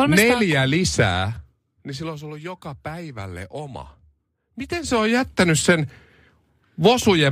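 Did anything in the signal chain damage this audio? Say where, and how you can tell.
Yes. Zipper noise from 4.62 to 5.10 s: a level change of roughly 15 dB is applied in discrete steps, about a hundred per second, without smoothing, which points to gain updated once per buffer in the driver or buffer stage. Each step leaves a small click, heard as a zipping texture over the speech.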